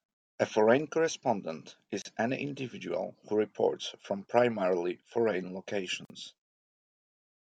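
Right after "foreign correspondent", at about 2.02 s, the speech drops into a 32 ms hole before "any individual who reports" picks up. A second one opens at 6.05 s and runs 49 ms. That's a gap at a join of encoded pieces: the audio was encoded in chunks and butted together without trimming each encoder's lead-in silence and end padding. Edges are smeared by the codec, spaced every 4 s, and the speech resumes exactly where it stopped.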